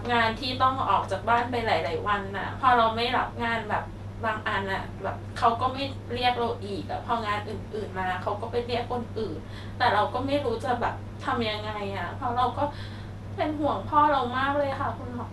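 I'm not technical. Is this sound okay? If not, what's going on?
No. The speech was most likely squeezed hard by MP2 compression, an older format used in digital radio that saves space by splitting the sound into narrow slices and switching off the ones it can't afford. From start to finish, the top end is simply gone, with nothing above 12.2 kHz, so the voice sounds dull. The remaining slices are stored roughly, which adds a clearly audible gurgling, grainy roughness throughout.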